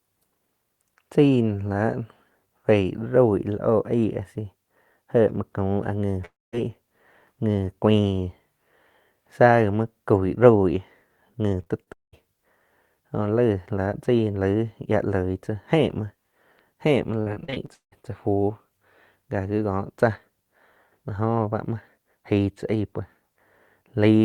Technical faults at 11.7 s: repeated packet loss (robotic sound)

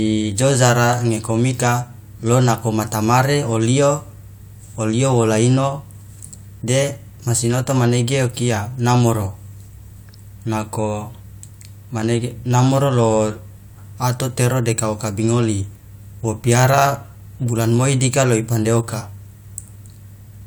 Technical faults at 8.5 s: none

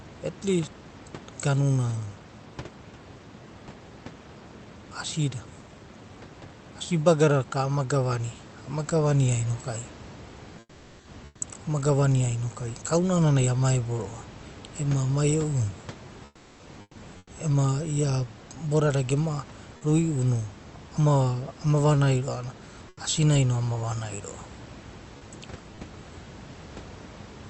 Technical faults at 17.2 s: comfort noise in place of the background

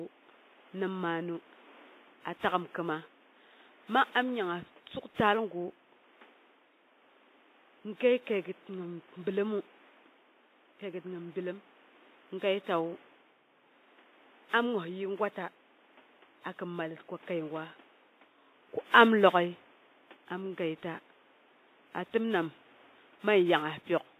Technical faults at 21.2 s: WMA compression

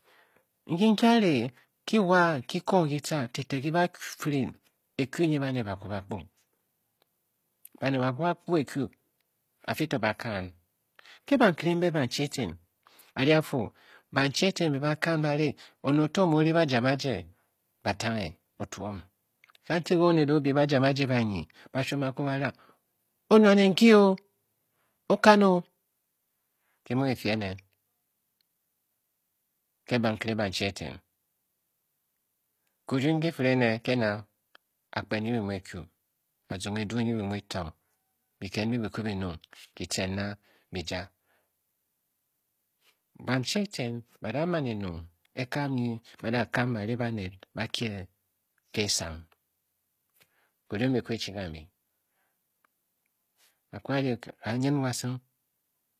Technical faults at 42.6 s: HE-AAC compression

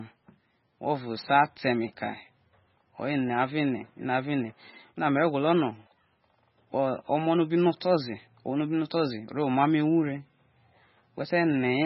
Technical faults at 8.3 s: MP3 compression

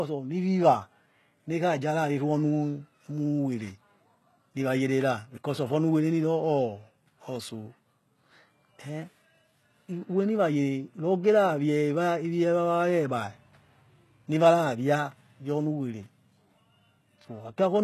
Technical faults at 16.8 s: HE-AAC compression

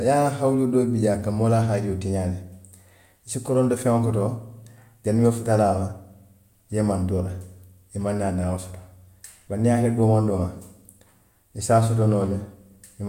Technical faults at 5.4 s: none

